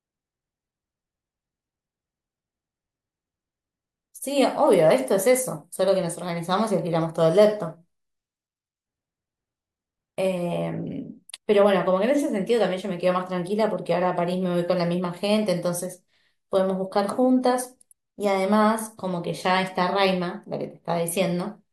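Speech recording with no audible technical faults.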